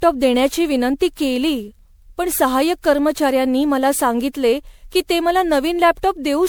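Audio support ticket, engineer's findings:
Generation loss throughout: swirly, hollow speech, smeared attacks, band-limited at 20.8 kHz. Likely repeated MP3 re-encoding, around seven passes at roughly 128 kbit/s, stacking quantisation noise.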